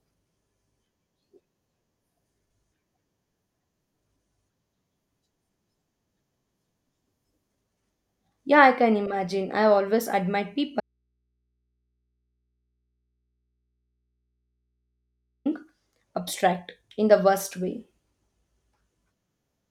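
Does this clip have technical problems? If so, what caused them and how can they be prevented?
Yes. The clip has an audio dropout to a faint residue from 10.80 to 15.46 s. The signal feed was likely interrupted, perhaps by a loose connector or a briefly disconnected source, while the input stage behind it stayed powered and open. The speech stops abruptly for about 4.65 s, and the gap holds only mains hum from the unterminated input, about 55 dB below the speech level, before the speech snaps back. Secure and strain-relieve all cables and connectors, and monitor the input during recording so that any break is caught at once.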